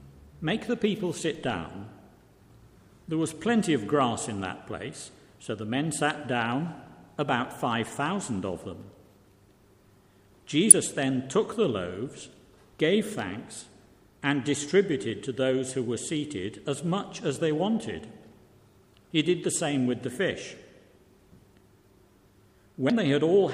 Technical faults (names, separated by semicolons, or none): damaged data in a compressed stream